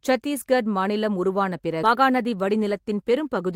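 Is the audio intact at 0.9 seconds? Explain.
Yes, the speech at 0.9 seconds is intact, with no audible fault at that moment.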